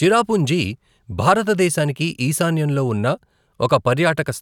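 No technical faults can be heard anywhere in the recording.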